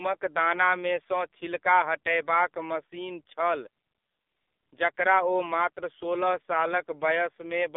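Speech heard through the AMR narrowband mobile codec for its whole length, squeezed into a line band of about 250 Hz to 3.6 kHz. Heavy coding damage gives a buzzy, synthetic vocal-tract sound, consistent with the low 5.9 kbps mode, which plain telephone band-limiting alone would not produce.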